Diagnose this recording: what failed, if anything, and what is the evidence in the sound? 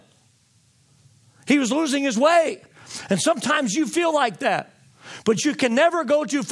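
Nothing in the recording points to a failure at any stage of the chain. The speech contains no audible event that would call for a diagnosis.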